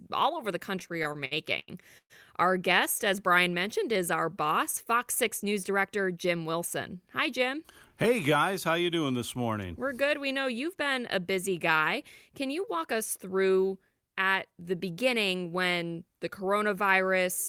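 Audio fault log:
0.79–2.12 s, repeated stalls (stutter): the speech drags and stutters through eleven brief hangs, the longest about 121 ms, where the last sound is held and stretched. Packets arrived late, so the jitter buffer kept running dry. About 345 ms was filled in, roughly a quarter of the span, with nothing lost.
4.96–6.33 s and 12.29–13.18 s, jitter buffer speed-up: the speech sounds hurried at unchanged pitch, running at 105% and then 107% speed. The buffer had built up excess delay, so the receiver trimmed many tiny pitch-period slices, around 70 ms in each stretch.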